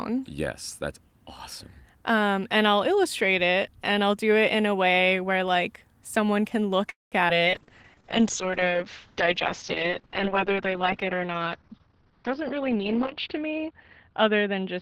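A call audio freeze runs from 6.89 to 7.14 s. The sound stalls for about 223 ms: the last sound carries on as a fading buzz or hiss, then about 170 ms of silence follows. This likely comes from held-up packets draining the jitter buffer. Playback then resumes where it stopped, so the gap is inserted and nothing is lost.

Short concealed packet loss follows at 7.28 to 7.31 s. About 40 ms of audio never reached the decoder in time. The receiver patched roughly 12 ms of it by extending the preceding sound, then crossfaded back. The result is a brief smear or wobble as the delay shrinks by around 30 ms.

A call bitrate drop starts at 7.47 s and lasts to the end. The encoder falls from 32 kbps to 7 kbps and stays at the lowest rate for about 5.9 s. The audio band narrows from 20 kHz to 6 kHz, so everything after sounds muffled, rough and watery.

A jitter buffer speed-up runs from 11.84 to 13.29 s. 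The receiver trims surplus buffered audio by repeatedly cutting out pitch-period-sized pieces, about a fifth of a second in total. Playback runs at roughly 116% speed with the pitch unchanged, so the passage sounds hurried.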